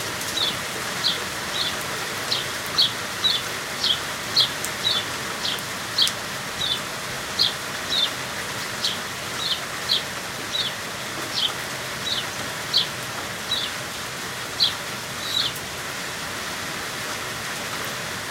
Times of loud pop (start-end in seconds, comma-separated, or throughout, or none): 1.22-1.24, 4.41-4.43